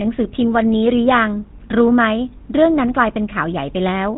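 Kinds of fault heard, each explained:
GSM full-rate codec: the old phone codec models the voice with a pulse-driven filter and cuts everything above 4 kHz, so this speech sounds buzzy and gravelly throughout, fitting a 13 kbps stream.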